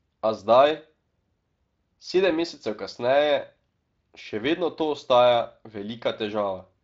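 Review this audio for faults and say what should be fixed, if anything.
Nothing stood out on listening to this speech clip, so there is nothing here that needs fixing.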